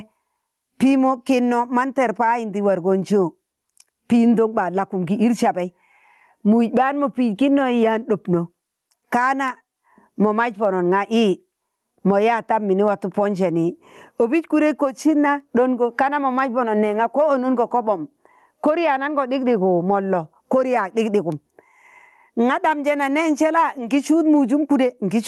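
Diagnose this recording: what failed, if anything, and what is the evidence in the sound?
Gain pumping runs through the whole recording, with a level swing of roughly 15 dB, and loud and quiet syllables sit unnaturally close together. The fault is in the capture stage. The input gain is likely set far too high for the microphone, so a fast limiter or compressor clamps down on each peak and releases in the gaps. The Opus call path's top end, which stops near 12 kHz, is separate from this.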